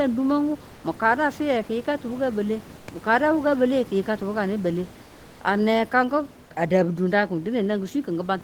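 A speech recording with a room background sitting about 23 dB below the speech. Three times, that background gives way to comfort noise in place of the real background: at 0.75 s for 80 ms, at 2.79 s for 80 ms, and at 5.03 s for 360 ms. The room detail vanishes into a smooth, featureless hiss, about 2 to 4 dB quieter. The likely cause is Opus discontinuous transmission, where synthetic noise fills pauses the sender stopped transmitting.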